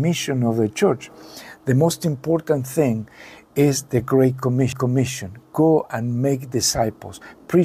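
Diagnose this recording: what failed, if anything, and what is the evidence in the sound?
At 4.72 s the sound breaks with a short tick and a brief mute of a few milliseconds, then resumes from a different point. This is a CD skip at the playback stage: a knock or disc flaw made the laser jump to another track turn.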